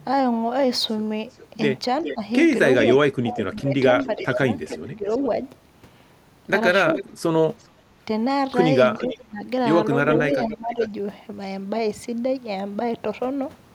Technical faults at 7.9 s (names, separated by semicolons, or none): echo leak; background gated by the echo canceller